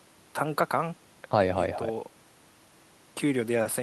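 Nothing goes wrong anywhere in this bit of speech, so there's no technical fault to point to at any moment.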